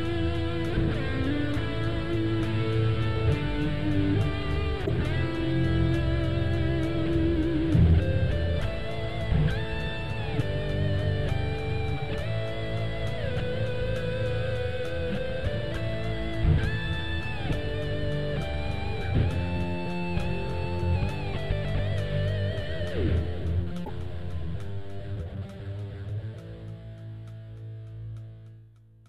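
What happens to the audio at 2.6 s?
Nothing goes wrong at 2.6 s: the audio plays through that moment intact, with no dropout, click or other fault.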